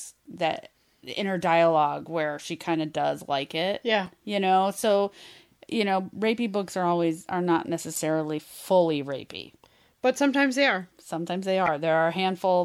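A speech clip with damaged data in the compressed stream: corrupted bytes leave the decoder misreading frames and losing sync until it finds the next valid header. Each hit sounds like a brief chirp, squawk, click or short hole, at 4.06 s, 7.95 s and 11.66 to 11.68 s.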